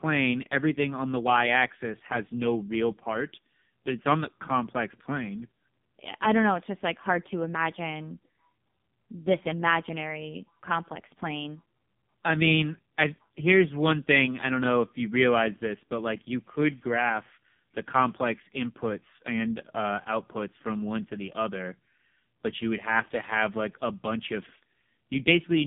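Throughout, the speech carries heavy AMR narrowband mobile codec damage. Nothing passes above 3.6 kHz. The voice sounds buzzy and synthetic, which fits a very low rate near 5 kbps.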